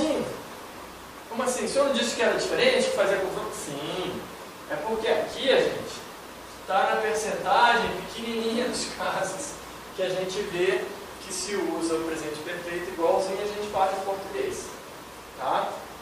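No audible technical faults anywhere in the recording.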